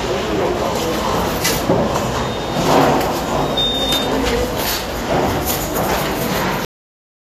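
Throughout, the sound is hissy and grainy with blurred attacks and nothing above 14.2 kHz, likely Vorbis compression at a low bitrate near 37 kbps. Its granular treble noise sets it apart from plain low-pass filtering. At 6.65 s a cut-off end stops the audio mid-sound into digital silence with no decay; it never resumes, unlike a dropout.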